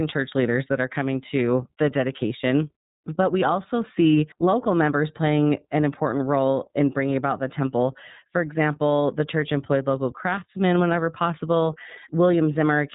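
From start to finish the speech carries the sound of the iLBC codec, a narrowband VoIP coder. Nothing above about 3.8 kHz survives, so sibilants and consonant detail sound dull and boxed in. Each 30 ms frame has its excitation coded on its own, without reference to the previous one, and at a rate that fits roughly 13.3 kbps the damage is plainly audible: the voice stays intelligible but comes across rough and synthetic.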